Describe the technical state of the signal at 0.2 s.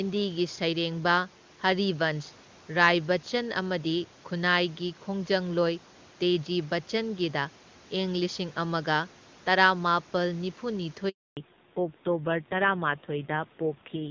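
At 0.2 s the speech is intact, with the band-limited call character and a low room noise floor, about 29 dB below the speech, and no fault present at that moment.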